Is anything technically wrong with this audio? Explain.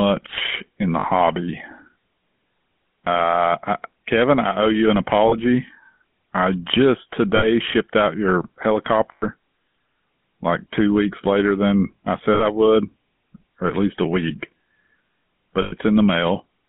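Yes. The speech has passed through the GSM full-rate codec for its whole length. The coder rebuilds the voice from a vocal-tract model excited by a sparse, regularly spaced pulse train, and this clip's band runs only from about 150 Hz to 3.4 kHz, which points to the 13 kbps full-rate coder. The codec damage is plainly audible: a buzzy, gravelly roughness laid over the voice, with the thin, boxed-in sound of a narrow phone line.

There are also lost GSM frames at 1.0–1.07 s after "in the", 5.28–5.35 s after "I owe you an", 7.36–7.46 s between "I just" and "shipped out your", and at 9.12–9.25 s, 12.34–12.44 s and 15.62–15.73 s. At each gap the decoder reused the last good frame's settings instead of new data. The gaps last about 40 ms, 40 ms, 60 ms, 100 ms, 60 ms and 100 ms, which fits runs of two to five 20 ms frames. Each one holds the sound as a short, rough, metallic ring.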